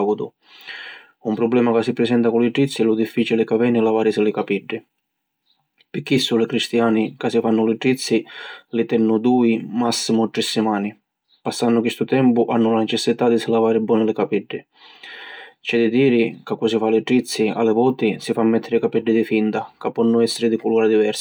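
Speech recording, with no technical faults to report. Nothing in the audio calls for a time stamp or a cause.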